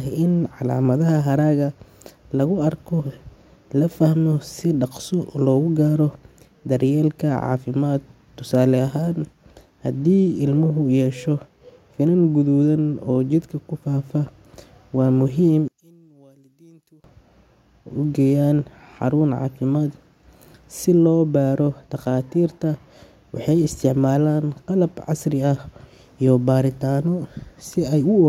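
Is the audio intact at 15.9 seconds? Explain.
No. At 15.9 seconds the clip sits inside a span from 15.68 to 17.04 s where the speech collapses by about 32 dB, leaving only a faint residue. The likely cause is one channel inverted: with one stereo side in reversed polarity, summing to mono cancels everything common to both channels, so the centred speech and its low end nearly disappear and only the small left-right difference remains audible.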